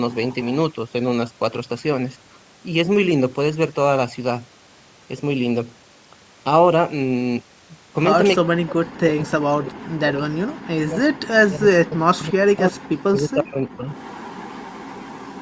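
From 0.13 to 0.52 s a faint copy of the speech trails the original by about 0.35 s, sitting roughly 30 dB down. This is likely an echo leak: a far end on loudspeaker whose echo canceller let some of its microphone pickup return.

Between 8.41 and 13.89 s the speech repeatedly sinks and breaks into pieces, with the deepest dips around 40 dB and about five seconds affected in all. The likely cause is speech suppressed in double talk: with both sides talking, the echo canceller muted the talker along with the echo.

The same delayed echo comes back at 13.92 s and runs to the end of the clip, again about 0.35 s behind but stronger now, roughly 20 dB below the speech. This again points to an echo leak getting past the canceller.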